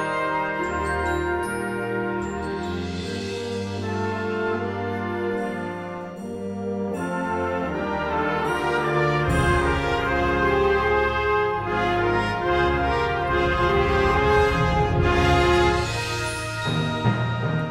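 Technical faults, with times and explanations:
No technical faults can be heard anywhere in the audio. There is nothing in it that calls for a time or an explanation.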